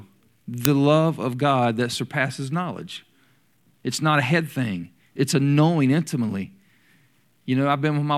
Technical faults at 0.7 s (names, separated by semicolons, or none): uninitialised buffer